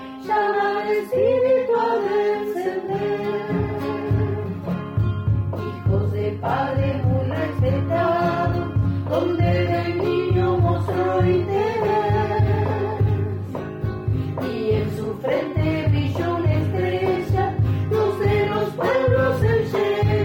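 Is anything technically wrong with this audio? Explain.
No, nothing technically wrong stood out on listening to this audio.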